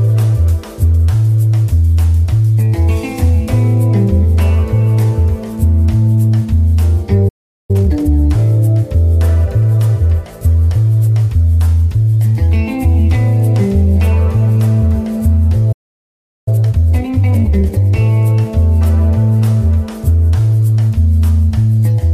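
At 7.28 s the sound cuts out for 0.41 s. This is a playback stall, likely from the player running short of data. From 7.71 to 8.11 s a time-compressed catch-up follows. Small pieces are cut and cross-faded, so the sound rushes at double speed, at normal pitch. At 15.72 s a second stall leaves 0.74 s of silence, likely for the same reason. From 16.48 to 17.96 s the catch-up runs at 1.5 times speed.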